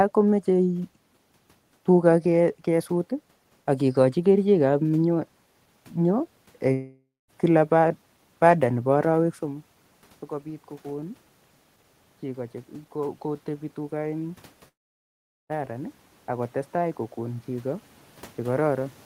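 At 6.73 to 7.30 s, and again at 14.68 to 15.51 s, a long network dropout, likely, fills each gap with a fading buzz, then a flat, empty waveform before speech resumes with content missing. From 12.21 s, automatic gain rising lifts speech and room noise together by about 8 dB as the quieter input is raised. This shows as a slowly swelling envelope and evenly strengthening spectrogram through 19.03 s.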